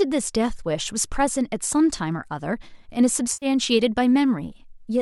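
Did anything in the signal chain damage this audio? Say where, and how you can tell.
Yes, in the network and decoder stage: AAC frame loss with concealment from 3.33 to 3.46 s. About 90 ms of sound turns smeared and noisy, which fits roughly nine short frames, likely low-delay AAC, being rebuilt from the last good spectrum. On a spectrogram the harmonics blur into a noise-filled band.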